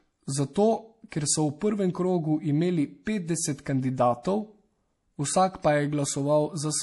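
Speech, carrying plainly audible MP3 compression throughout: nothing survives above 11.5 kHz, and the sound has the watery, swirling quality of weak spectral lines dropping in and out between frames, likely from an MP3 encoder starved of bits, which fits a low bitrate of around 48 kbps. Pre-echo appears at 1.09–1.12 s, just before "ker so v prvem", and again at 3.03–3.07 s. In each case a short hiss runs ahead of a sharp onset for 32 ms and 37 ms respectively, because quantisation noise sized for the loud attack is spread across the quiet start of the transform block.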